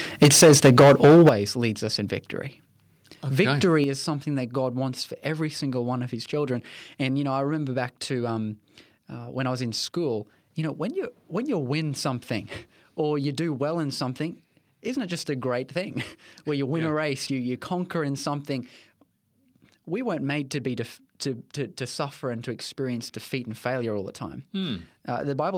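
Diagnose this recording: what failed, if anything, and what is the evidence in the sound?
Microphone overload, 0.22 to 1.29 s, just before "leads us in victory": harsh, crackly, flat-topped peaks, likely input gain driving the converter about 12 dB past full scale.

Microphone volume stepped down at 0.23, 1.29 and 3.84 s: abrupt level drops of about 3, 11 and 5 dB, likely call-processing gain control reacting to the clipping.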